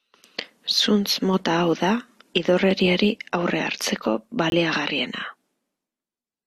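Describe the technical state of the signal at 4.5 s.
A corrupt frame muted at 4.50–4.53 s, just after "da idorreriari aurre hartzeko": the decoder rejected one damaged frame and silence replaced it, an abrupt 34 ms hole.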